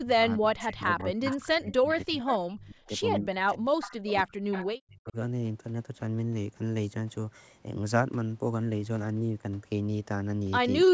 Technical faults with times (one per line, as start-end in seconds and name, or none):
0.00-2.17 speech suppressed in double talk
0.99-1.36 echo leak
1.71-2.31 echo leak
2.52-5.16 speech suppressed in double talk
3.81-4.10 echo leak
4.51-4.66 echo leak
10.86-10.94 speech suppressed in double talk